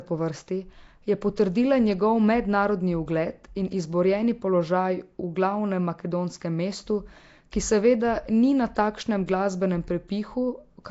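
Throughout, the speech sounds rough and hissy, with a smeared, underwater quality. Nothing is heard above about 7.7 kHz. This is likely Nellymoser compression, which fits a 32 kbps stream. Starved bands are filled with noise, so the damage is plainly audible.

At 1.36 s and again at 7.52 s, pre-echo softens a sharp attack. Quantisation noise spreads across the whole coded block and leaks into the quiet just before the onset. A brief hiss of about 13 to 14 ms precedes each attack.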